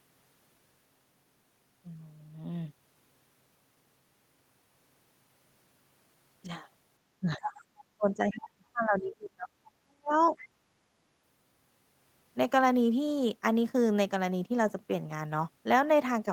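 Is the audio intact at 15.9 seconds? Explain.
Yes, at 15.9 seconds the speech plays through intact, with no audible dropout, click, distortion or other fault at that moment.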